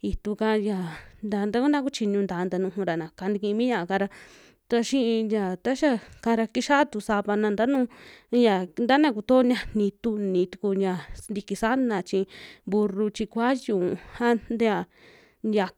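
At 7.75 s, a short spike sits on top of the speech. It is an electrical switching spike, peaking at roughly -25 dBFS. It is very brief. The likely cause is a nearby switch or static discharge arcing into the audio line.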